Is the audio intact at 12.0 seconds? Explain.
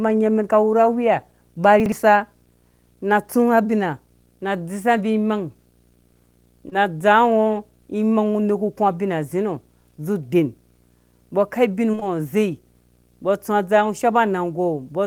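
No. From 11.91 to 12.03 s, consecutive audio packets, consistent with 20 ms framing, arrived too late and were concealed. This short concealed packet loss continues the previous sound and blends back, giving a brief smear or wobble where a consonant can vanish. A display or video cable also couples in video or display buzz, a 60 Hz hum with hash above it, roughly 35 dB below the speech.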